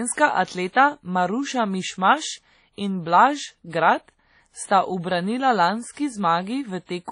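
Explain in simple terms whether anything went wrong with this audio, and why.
Throughout, the speech sounds washy and ringing, with a hiss that swells and fades along with the talking and nothing above about 10.1 kHz. That points to heavy WMA compression as the likely cause. Unlike simple background noise, this hiss follows the sound rather than staying constant.

At about 0.72 to 0.75 s, a brief hiss of roughly 31 ms arrives just before a sharp onset, softening its edge. This is pre-echo: the codec smeared noise backwards in time. Unlike an echo, it comes before the sound, not after.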